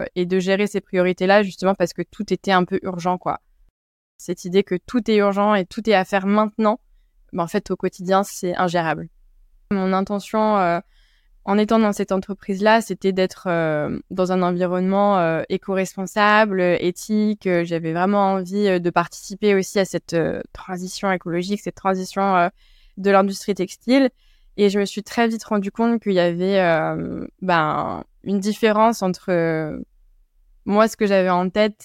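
A speech recording with nothing technically wrong with it.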